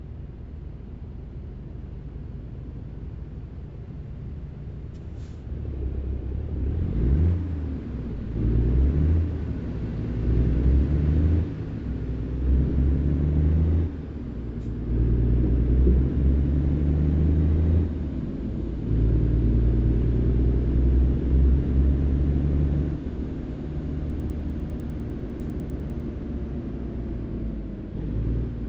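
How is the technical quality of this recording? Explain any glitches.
There is one glitch, from 24.1 to 26.0 s: the resampler restarted on every block. The rate converter, apparently stepping up from 16 kHz to 48 kHz, processed each 100 ms block in isolation, so at every block boundary it lacked the true neighbouring samples and left a small discontinuity. Across those two seconds this is heard as a steady ticking at 10 Hz, riding on the sound wherever signal is present.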